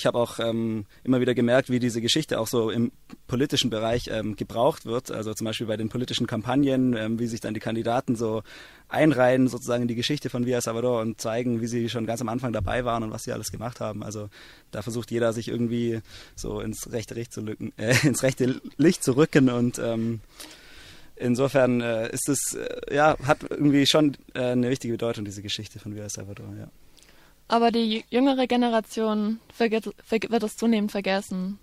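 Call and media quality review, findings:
Adaptive stream at a lower bitrate, 5.28 to 9.28 s: abrupt rise in codec artefacts for 4 s, no gap at either switch. Player dropped to a lower-bitrate rendition; sound fits roughly a halving, Opus 64 to 32 kbit/s.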